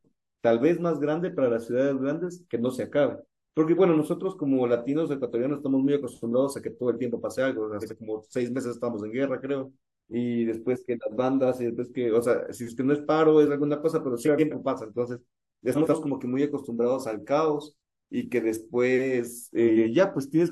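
Frames out of order garble this speech recording at 7.81–7.93 s, 14.25–14.55 s, 15.74–15.96 s and 19.67–19.87 s. In each stretch, two adjacent blocks of audio were decoded in swapped order, so the second half plays before the first. The blocks are about 43 ms, 128 ms, 85 ms and 85 ms long, consistent with one to three codec frames apiece. Each swap gives a brief fluttering jumble, and no time is lost.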